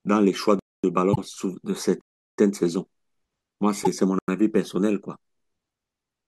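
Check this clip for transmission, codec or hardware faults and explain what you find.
The speech clip has two kinds of fault: three blocks of digital silence and two bursts of damaged data in a compressed stream.

Blocks of digital silence occur at 0.59–0.84 s (243 ms), 2.01–2.38 s (372 ms) and 4.19–4.28 s (93 ms). The last two fit blocks of 16384 and 4096 samples at 44.1 kHz. Each time, the output buffer likely went out as zeros instead of audio, so the sound drops abruptly to dead silence and returns with no fade. The longer gaps are heard as distinct holes.

Damaged data in a compressed stream appears at 1.11–1.18 s and again at 3.80–3.87 s, each lasting about 70 ms. Corrupted bytes in the stream made the decoder misread those frames and lose sync until it found the next valid frame header. The result is a brief chirp, squawk, click or short hole where the speech should be.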